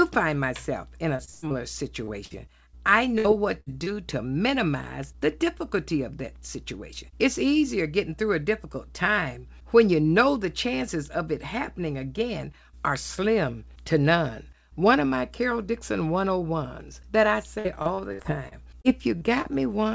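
From 1.16 to 1.53 s the speech shows repeated packet loss with a robotic sound. Four gaps, the longest 119 ms, remove 210 ms of audio, and about half of that stretch is filled by extending the last sound. The result is choppy.

At 2.04 to 2.10 s and again at 3.84 to 3.95 s there is short concealed packet loss. Each time about 30 ms never arrived and was patched from the preceding sound, which leaves a brief smear or wobble. The second patch also adds a little extra length.

Bursts of packet loss occur at 2.25 to 2.33 s, 3.18 to 3.27 s and 3.60 to 3.69 s, each dropping 60 ms. The decoder holds and fades the last sound into a buzz or hiss before resuming further on. The first burst also runs 12 ms long.

From 17.59 to 19.47 s the repeated packet loss returns. Nine gaps, the longest 64 ms, remove 330 ms, and about 17% of the span is concealed, giving intermittent robotic chop. The G.722 call path behind all of this carries nothing above 8 kHz.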